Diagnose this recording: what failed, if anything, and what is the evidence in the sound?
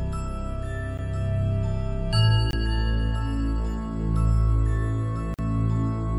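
The output buffer likely went unfilled three times, leaving a block of digital silence each time: a click at 0.98 s, then hard-edged holes at 2.51–2.53 s and 5.34–5.39 s, lengths fitting 512-, 1024- and 2048-sample buffers.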